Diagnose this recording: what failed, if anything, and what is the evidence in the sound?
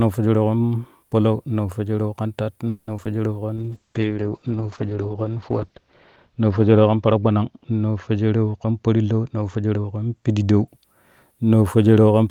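Network stage, call audio freeze: after "palau naafwejereu kan tat", from 2.69 to 2.89 s, the last sound carries on as a fading buzz for about 180 ms before speech resumes with nothing missing. This points to delayed packets, likely, leaving the jitter buffer empty so the receiver extended the audio.

Network stage, short concealed packet loss: brief smears at 2.97 to 3.00 s and 3.04 to 3.07 s, each about 30 ms. Roughly 20 ms of speech never reached the decoder in each case, and the receiver patched the gap by extrapolating the preceding sound before blending back.

Codec stage, call bitrate drop: from 3.57 to 10.74 s the speech becomes rough and muffled. The encoder rate fell from 32 to 8 kbps, sitting at the floor for about 2.3 s, and audio bandwidth narrowed from 20 kHz to 8 kHz, removing high-frequency detail.

Call processing stage, jitter buffer speed-up: from 8.64 to 9.79 s the speech runs about 15% fast at unchanged pitch and sounds hurried. 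The receiver trimmed short pitch-period segments repeatedly, about a fifth of a second in total, to drain excess buffered delay.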